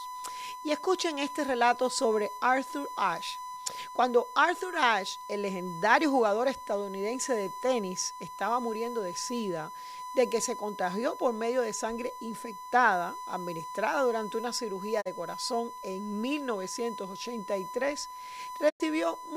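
From start to finish a steady USB whine sits under the speech, a fixed tone at 1 kHz and strongest there, roughly 10 dB below the speech and so clearly audible. The 1 ms frame timing of a USB bus is leaking through shared power or ground into the audio path. Unlike mains hum, which sits at 50 or 60 Hz and its low harmonics, this is a thin, high, unwavering pitch that tracks the bus clock, not the electricity supply.

At 15.00 s, just after "administrada durante una cirugía" and before "corazón en", a digital broadcast dropout fades the sound to silence over 20 ms, leaving a hole of about 72 ms. The receiver has muted on frames that failed, which fits the loss of a single 32 ms frame. A second, longer dropout at 18.68 s lasts about 136 ms, fitting three frames or 96 ms of lost audio. Each gap is a clean, faded mute with the missing material simply absent. Packet-loss concealment would instead fill the gap with repeated or smeared sound, and a plain edit would cut without the short fade.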